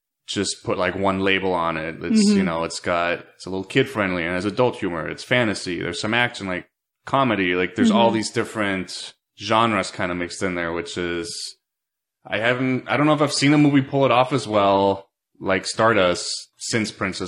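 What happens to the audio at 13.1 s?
The treble suddenly dulls, with nothing left above 16.8 kHz and codec artefacts rising, from 12.04 s to the end. This is an adaptive stream at a lower bitrate, consistent with a drop from about 96 kbit/s AAC-LC to about 24 kbit/s HE-AAC.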